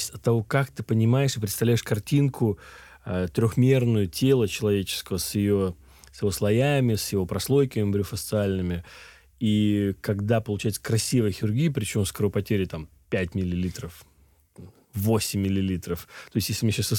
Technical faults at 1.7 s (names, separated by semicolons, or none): none